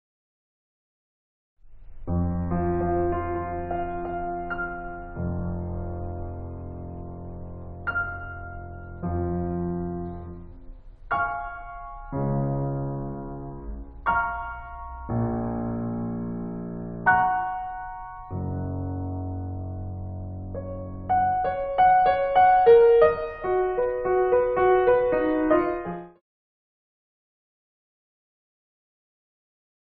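Music, no technical faults audible, with a smooth editorial fade-out from around 25.5 s that completes at 26.2 s.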